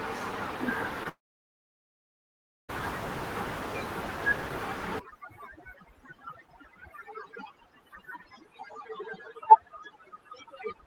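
Short concealed packet loss at 1.03 to 1.07 s: about 20 ms of audio arrived too late to decode, so the receiver extended the preceding sound for roughly 17 ms and blended back into the real signal. The result is a brief smear or wobble.

Long network dropout from 1.09 to 2.71 s: the sound continues briefly as a fading buzz, then about 1.5 s of silence follows before the audio returns with roughly 1.6 s missing. The likely cause is a stretch where no packets got through.

Overdone noise removal from 4.99 s to the end: the room noise, sitting about 13 dB below the speech, drove an aggressive suppressor that shuts off frequency bands it judges noisy. The background drops and breaks up into twinkling specks.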